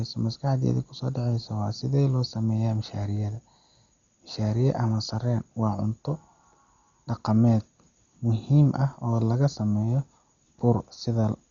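Throughout the speech, nothing is heard above 6.9 kHz, with rough, fluttering noise around tones; likely Dolby Digital compression at a very low bitrate, near 40 kbps, starving lines of mantissa bits.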